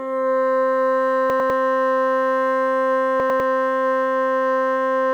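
A chunk of audio reached the output one slot late, so two adjacent 100 ms chunks played swapped: chunks out of order, at 1.3 to 1.5 s and again at 3.2 to 3.4 s. No music is lost, but each time the later slice plays before the earlier one, leaving three abrupt joins. The result is a brief stumble where the music seems to hiccup backwards.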